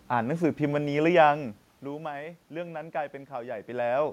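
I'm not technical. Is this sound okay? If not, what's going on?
Yes, nothing is wrong with the system; the background noise is just the room, and the voice getting softer or louder around a second and a half in and again near three and a half seconds is the talker shifting position relative to the microphone.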